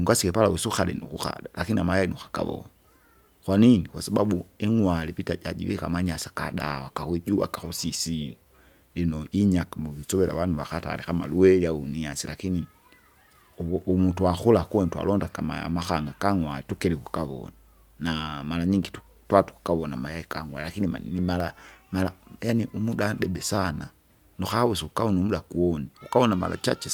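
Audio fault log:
Nothing to log here, as the speech runs along without a single problem worth a line.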